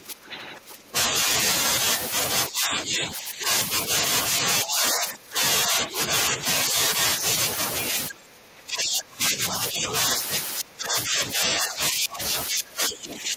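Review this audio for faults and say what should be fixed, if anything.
Speech suppressed in double talk occurs at 0–1.26, 2.49–3.49, 4.42–6.41, 8.09–9.93 and 10.59 s to the end. The speech dips by up to about 20 dB. The likely cause is an echo canceller mistaking near-end speech that overlaps far-end speech for echo. Tune its double-talk detection to preserve near-end speech.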